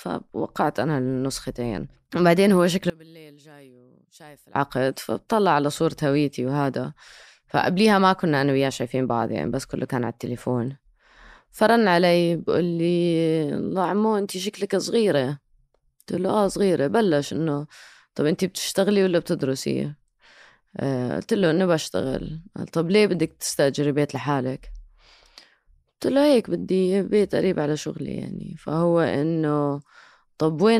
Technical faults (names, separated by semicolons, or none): one channel inverted